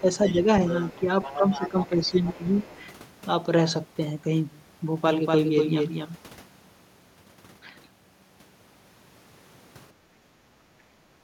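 This is a speech recording from a call, with echo-canceller faults at both ends and a doubled stretch in the middle. The first fault is speech suppressed in double talk. It shows up three times. From 0.0 to 0.48 s the talker's level dips by about 10 dB, for around a fifth of a second in total. From 0.98 to 2.68 s it dips again, by about 10 dB, for roughly a second altogether. From 9.97 to 10.25 s there is a brief, deeper dip of about 15 dB. The likely cause is an echo canceller that could not tell the local talker from loudspeaker echo while both sides spoke, so it pulled everything down. The second fault is the other side's voice leaking through. A faint second voice appears from 0.24 to 0.32 s, about 20 dB under the talker. It returns from 0.7 to 2.86 s, a little stronger at about 15 dB down. That longer stretch overlaps the second dip, which fits the double-talk picture. The likely cause is residual loudspeaker echo that the canceller left in the microphone signal. 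The third fault is a doubled audio track, from 5.06 to 6.16 s. A second copy of the speech trails the original by about 200 ms, about 5 dB quieter. It is full-band, with no decay or room colour. It starts and stops abruptly. The likely cause is the same audio mixed in twice, from a slower capture path or an edit holding two offset copies. The fourth fault is background gated by the echo canceller, from 10.29 to 10.45 s. The room sound drops by 11 dB for about 150 ms, then comes back. This happens when the canceller clamps the microphone hard during loudspeaker playback and then releases it. It follows right after the last double-talk dip.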